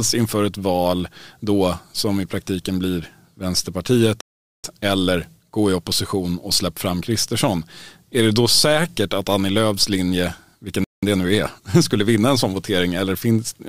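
The speech cuts out abruptly at 4.21 s for about 0.43 s, resuming on "eller gå i opposition", and again after "linje vilken" from 10.84 to 11.03 s. These are playback stalls, likely caused by the player running out of data or being blocked.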